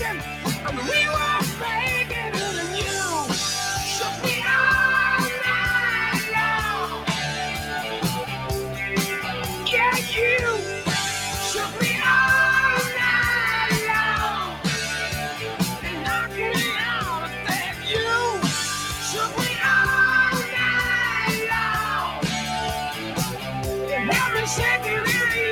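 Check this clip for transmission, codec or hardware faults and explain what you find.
The one fault here is processing rather than transmission or hardware: a speech noise suppressor is working on material it wasn't built for.

Noise suppressor applied to music or sounds, throughout the clip. The suppressor treats sustained and ambient parts of the sound as background noise and keeps turning them down, while sharper onsets pass more easily. Its gain reduction keeps shifting, by roughly 5 dB, so the level seems to breathe and the held portions and tails lose body and sound thinned.

Sound cut by the noise suppressor, at 0.18 to 0.65 s, 14.47 to 14.65 s, 15.33 to 15.6 s, 15.76 to 16.06 s, 17.24 to 17.47 s, 17.71 to 17.86 s and 22.94 to 23.17 s. In these spans the suppressor judges the sound to be noise and pulls it down harder than its surroundings, by about 6 dB, or about 4 dB at 22.94 s. 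Each is heard as a brief sag or shortened decay lasting a fraction of a second, clustered most densely between 14 and 18 s.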